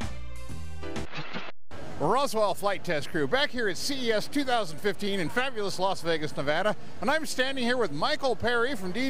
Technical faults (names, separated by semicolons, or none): DC offset